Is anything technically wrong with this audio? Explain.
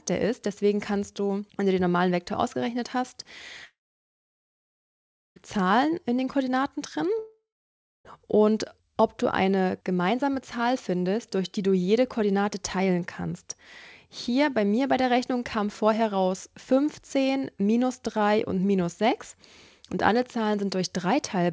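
Yes. A long network dropout, likely from lost packets, hits at 3.65 to 5.39 s and 7.19 to 8.19 s. Concealment briefly extends the last sound, then falls silent, and that audio never returns. The G.722 call path leaves nothing above 8 kHz.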